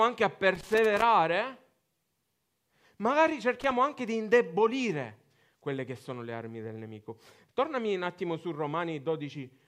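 A speech recording marred by loose connector crackle in two irregular bursts, the first from 0.55 to 1.02 s and a shorter one from 3.60 to 3.71 s. A worn or dirty contact is rapidly making and breaking, chopping the signal and leaving scratchy crackle. On a waveform these show as ragged dropouts and sharp spikes; on a spectrogram, as broadband vertical streaks scattered unevenly across both stretches.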